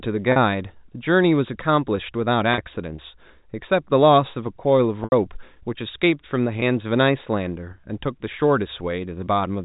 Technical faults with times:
0.32-0.36 packet loss with pitch repetition
2.54-2.58 packet loss with pitch repetition
5.04-5.12 packet loss with pitch repetition
6.60-6.62 packet loss with pitch repetition

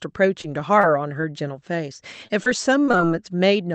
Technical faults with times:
0.41-1.25 repeated packet loss (robotic sound)
2.27-3.06 repeated packet loss (robotic sound)

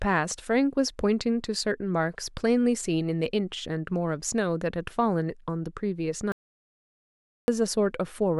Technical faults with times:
6.32-7.48 audio dropout to silence

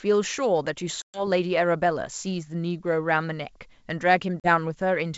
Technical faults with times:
1.02-1.27 packet loss on an ADPCM call
4.40-4.49 packet loss on an ADPCM call

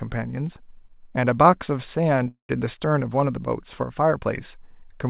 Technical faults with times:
2.28-2.51 call audio freeze

